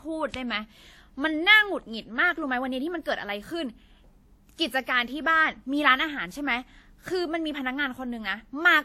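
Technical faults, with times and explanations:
Throughout, transcoding between lossy codecs: the speech was likely encoded twice, first by a WMA-style coder and then re-encoded by Vorbis, at 64 and then 51 kbit/s. The second encoder spends its limited bits reproducing the first one's artefacts while adding its own, so two layers of codec distortion sit on the speech at once. Nothing is present above 16.5 kHz, the lowest band limit in that chain.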